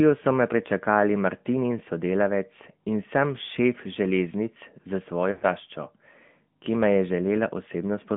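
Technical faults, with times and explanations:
Throughout, AMR narrowband mobile codec: the speech comes through a phone-style band of roughly 150 Hz to 3.5 kHz, nothing up top, and the damage is plainly audible: a buzzy, synthetic edge from the vocal tract model running at a bitrate that fits 10.2 kbps.
5.32 to 5.43 s, lost AMR speech frames: about 100 ms goes missing, which points to five dropped frames. The decoder keeps repeating the last good pitch and vocal tract settings at falling gain, so the sound smears and fades before the speech picks up again, a bit weak at first.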